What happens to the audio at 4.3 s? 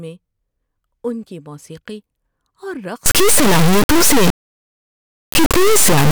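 At 4.3 s the speech is buried under an integer read as float fault, which runs from 3.06 s to the end of the clip. The samples appear to have been written as 32-bit integers but decoded as 32-bit floats, so the values become tiny, invalid or huge. The result is an extremely loud, buzzing square wave that slams between silence and the clipping limit. A waveform would show flat rails at the clipping limit. A spectrogram would show dense broadband harmonics.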